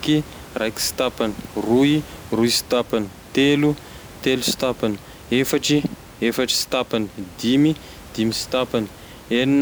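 No technical faults can be heard anywhere in this speech recording. A faint room noise sits in the background about 21 dB below the speech, and it belongs to the space where the microphone was.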